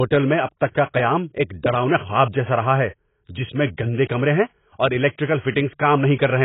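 From start to finish the speech has nothing above 3.8 kHz, and the swirly, smeared texture of a very low-bitrate encode runs through every phrase, even though the file is a 256 kbit/s MP3. This is likely low-bitrate audio saved at a high bitrate: the sound points to an earlier encode near 16 kbit/s, whose losses the later MP3 simply kept. A plain low-pass filter would leave a clean band without that smearing, and a genuinely low-bitrate file would be small.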